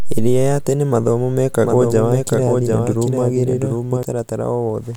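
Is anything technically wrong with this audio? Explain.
Yes. From 1.65 to 4.03 s there is a doubled audio track: an abrupt, full-band speech copy trails roughly 0.7 s behind, some 5 dB quieter, likely from a second, slower capture path. The spectrogram shows each pattern repeated, shifted right.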